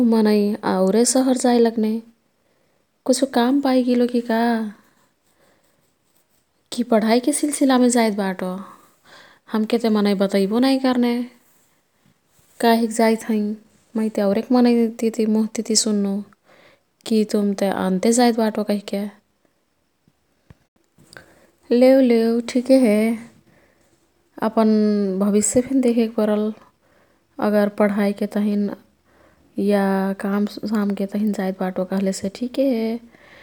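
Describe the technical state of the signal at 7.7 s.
At 7.7 s the speech is intact, with no audible technical fault at that moment.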